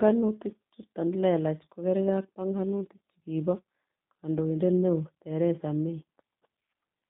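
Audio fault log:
Throughout, G.729 codec: the speech sits in a narrow telephone band, roughly 150 Hz to 3.7 kHz, with nothing above that, and carries a plainly audible rough, slightly synthetic edge. At 8 kbit/s the coder does not send the waveform. It sends a vocal tract filter, a pitch predictor and a few sparse pulses per frame, and rebuilds the voice from those. That buzzy, modelled texture is what separates it from a simple low-pass or band-limited line, which would sound muffled but natural.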